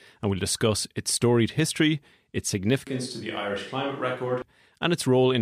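At 2.87 s the speech abruptly turns roomy and hollow, with thinner bass. It drops by about 5 dB, and faint background noise rises. This is a switch to a distant microphone, likely after the close mic cut out. It snaps back at 4.42 s.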